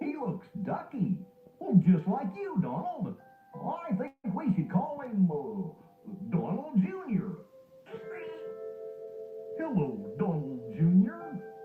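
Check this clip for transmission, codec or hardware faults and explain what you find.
Two transmission faults are present.

From 4.07 to 4.26 s there is a call audio freeze. The last sound stretches into a fading buzz, then about 60 ms of silence. The likely cause is delayed packets emptying the jitter buffer. Nothing is lost; the sound resumes about 166 ms late.

From 9.04 to 10.56 s there is a jitter buffer speed-up. The receiver removed about 150 ms in short pieces. The sound runs at 111% speed, at the same pitch, and sounds hurried.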